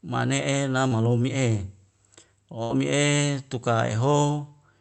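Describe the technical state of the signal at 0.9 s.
At 0.9 s there is short concealed packet loss from 0.87 to 0.93 s: roughly 40 ms never arrived and was patched by extending the preceding sound, giving a brief smear rather than a silent gap.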